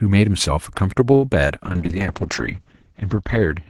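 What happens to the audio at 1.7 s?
A call bitrate drop begins at 1.64 s and lasts to the end at 3.70 s. The encoder is starved of bits, and the top end falls from 12 kHz to 8 kHz. The sound turns muffled and watery, which fits a rate near 7 kbps, held at its lowest for about 1.2 s.

Sample clock jitter runs underneath throughout. Slight timing wobble in the converter adds a faint roughness, roughly 45 dB below the sound, strongest on loud, bright parts.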